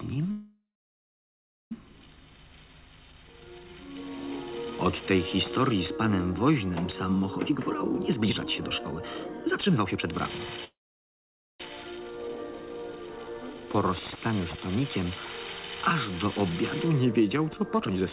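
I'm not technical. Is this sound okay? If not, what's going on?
No, there are two things going wrong, each happening twice.

The first is a call audio freeze, from 0.31 to 1.72 s and again from 10.64 to 11.61 s. The sound stalls, trails off briefly, then goes quiet for about a second the first time and just under a second the second time. The likely cause is data getting held up on its way, so the receiving end ran dry and had to wait. When the data turned up, the sound carried on right where it stopped. Nothing is lost, but everything after each stall runs about 1.4 seconds and then about one second late.

The second is a jitter buffer speed-up, from 7.35 to 10.39 s and again from 17.74 to 18.10 s. A backlog builds up, so the receiver catches up by snipping out lots of tiny slices in quick succession. The result plays at roughly 1.4 times normal speed in the first stretch and about 1.5 times in the second, but the pitch stays the same, so it just sounds rushed. 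The first stretch loses roughly a second and a half of material and the second a fraction of a second.

On top of that, it's all come through a phone-quality line, so the sound is a bit dull and boxy, with nothing above 4 kHz.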